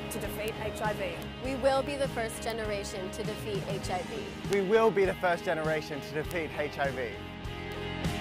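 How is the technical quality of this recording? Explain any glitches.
Six sharp ticks interrupt the recording, each a bit error spike. They fall at 0.48, 1.22, 2.50, 4.53, 6.31 and 7.72 seconds. A single bit flipped in memory or on a digital link. That threw one sample, or a few in a row, by a power of two before it snapped back. Each tick is broadband and has nothing to do with the sound around it. Peaks reach about -11 dBFS at 0.48, 4.53 and 6.31 s, about -17 dBFS at 1.22 and 2.50 s, and about -23 dBFS at 7.72 s.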